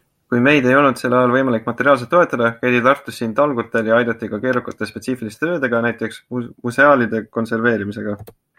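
Speech recording, no technical faults detected anywhere in the audio.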